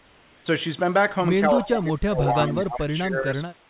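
From the start to 0.46 s, and again from 3.56 s to the end, the background is comfort noise instead of the real room sound: a flat, steady hiss about 3 dB quieter than the true background, which sits roughly 35 dB below the loudest speech. This is likely discontinuous transmission, where the sender goes quiet during pauses and the receiver synthesises noise. Unlike a noise gate, the background never drops to silence. It becomes smooth and featureless.

Between 1.49 and 3.34 s the speech is suppressed in double talk, for about one and a half seconds in total. The level dips by as much as roughly 20 dB, likely because the echo canceller turned everything down while both sides talked. A dropout would cut cleanly to nothing. Here the voice sags and recovers unevenly while the far side is active.

Inside that stretch come two echo leaks, at 1.61 to 1.66 s and 2.56 to 2.79 s. Each is a faint, delayed copy of the voice arriving 191 ms late, the first roughly 15 dB below the speech and the second fainter, around 25 dB down. 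They are likely loudspeaker sound that the canceller failed to remove. Reverb would blur the tail of each syllable, but these are distinct, displaced repeats.

The 4 kHz ceiling is consistent with a narrowband telephone codec.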